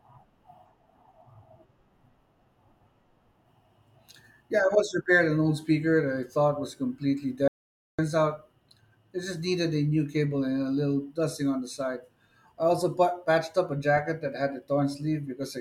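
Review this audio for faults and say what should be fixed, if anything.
After "I thought was completely", the speech cuts to dead silence from 7.48 to 7.99 s. This audio dropout to silence was likely a briefly lost input recorded as silence. Secure cables and monitor input levels during recording so the link can't drop out unnoticed.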